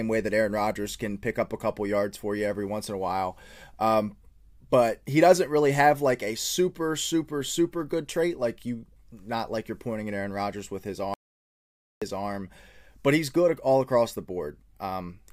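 At 11.14 s the speech cuts off abruptly and the track falls to complete silence until 12.02 s, when it resumes mid-flow. This is an audio dropout to silence lasting about 0.88 s. The gap carries no room tone or noise floor at all, which points to the input signal being lost, likely through a disconnected device, a failed link or a momentary mute, while the recorder kept writing silence. Whatever was spoken in that interval is unrecoverable.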